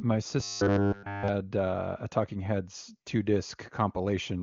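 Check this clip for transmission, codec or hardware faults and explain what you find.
One fault stands out: robotic sound from repeated short buffers, from 0.40 to 1.28 s. Across that stretch the speech becomes a rigid, metallic buzz pitched at 100 Hz. It still roughly tracks the speech. The cause is likely a playback stall, where fresh audio stopped arriving and the last fragment of about 10 ms was looped to fill the gap. All of that stretch is repeats, so the real audio there is lost. The AMR wideband (HD Voice) codec at 23.85 kbit/s leaves at most faint coding damage.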